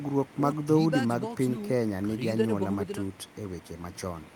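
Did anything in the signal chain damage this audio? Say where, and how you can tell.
No, nothing in the signal chain damaged this audio.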